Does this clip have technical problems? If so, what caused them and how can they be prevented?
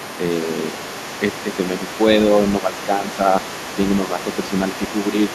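Yes. The other side's voice leaking through is audible throughout, a second voice sitting roughly 15 dB under the speech. The likely cause is a loudspeaker echo the canceller failed to fully remove. On a spectrogram it shows as faint, separate harmonic traces beneath the main voice. Using a headset, or a better-tuned echo canceller, prevents it.

Speech suppressed in double talk occurs at 2.6 to 3.34 s, dipping around 10 dB, and more mildly at 4.05 to 4.27 s and 5.12 to 5.32 s. The likely cause is the canceller turning everything down while both sides spoke. The waveform envelope visibly sags there, and the spectrogram thins. A headset, or a canceller that handles double talk better, avoids this.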